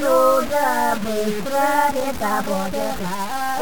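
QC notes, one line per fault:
throughout: low bit depth without dither. Gritty, signal-following grain about 15 dB down, likely from truncation to about 4 bits; the waveform shows coarse stair-steps.
1.84 s to end: time-stretched section. Pace jumps to about 1.89 times speed at unchanged pitch, sounding rushed; the spectrogram shows compressed events with abrupt splice seams.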